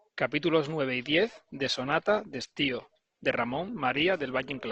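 At about 1.10 s the adaptive stream switched to a lower bitrate, sounding like a step from around 64 kbit/s Opus down to roughly 16 kbit/s. The speech quality changes abruptly, with more codec artefacts, and stays that way to the end without any gap.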